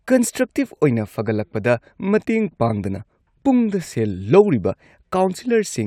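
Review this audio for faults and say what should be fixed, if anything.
No faults turn up in the audio, so nothing needs to be fixed.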